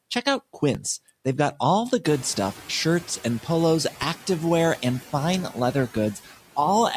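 Noise suppressor catching up, from 2.03 to 2.57 s: the room noise jumps by about 17 dB around 2 s, and the suppressor's noise estimate lags, so the noise passes through with less reduction at first, then sinks by about 5 dB over 540 ms as the estimate adapts.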